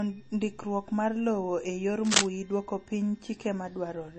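Low-bitrate audio saved at a high bitrate runs throughout: the MP3 artefacts fit a 32 kbit/s encode likely re-saved at 320 kbit/s, which cannot restore what was lost.

Cable scratch noise from 2.05 to 2.26 s adds dense, uneven rustling a few dB above the speech, likely from a worn cable or connector being moved.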